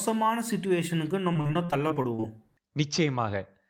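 Repeated packet loss (robotic sound) affects this speech clip from 1.33 to 2.24 s. Over that stretch, short holes up to 40 ms long recur in quick succession, each patched by extending the preceding sound, so roughly a quarter of the span is filled-in material and the speech turns choppy.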